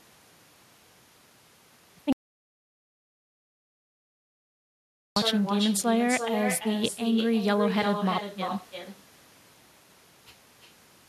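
Throughout, echo with no canceller shadows the speech: an uncancelled copy about 6 dB quieter returns roughly a third of a second later, showing as a quieter, delayed duplicate of each spectrogram streak. From 2.13 to 5.16 s, an audio dropout to silence removes about 3.04 s entirely. The waveform goes silent with no room tone, likely because the input was lost while recording continued.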